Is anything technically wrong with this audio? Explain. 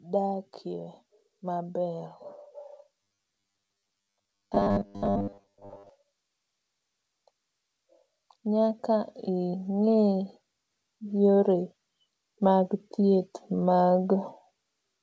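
Yes. From 3.01 to 5.90 s the speech takes on a robotic sound from repeated short buffers, likely because new audio arrived too seldom and a slice of about 10 ms kept being replayed. That forces a 100 Hz metallic buzz over most of that stretch. A spectrogram shows rigid, evenly spaced harmonics at 100 Hz multiples, and the waveform shows identical repeating cycles.

From 8.42 to 10.32 s there is automatic gain rising: the gain control judged the input too quiet and raised it by about 4 dB, so voice and background swell together. The waveform envelope grows steadily across those two seconds, and the spectrogram brightens uniformly at all frequencies. Throughout, the wideband call codec leaves nothing above 8 kHz.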